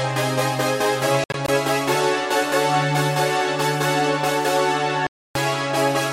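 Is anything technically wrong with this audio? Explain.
Yes. The sound breaks up with silent gaps between 1.24 and 1.49 s, the longest about 61 ms. It cuts out for about 0.28 s from 5.07 to 5.35 s, then resumes further along. This is a likely Bluetooth dropout, where late packets were discarded.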